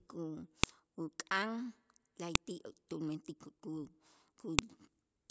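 Separate WAV pieces of this speech were joined with their headers left in, so a few dozen header bytes play as samples. That file header played as audio produces a sharp, loud click at 0.64 s, 2.35 s and 4.59 s, marking each new piece.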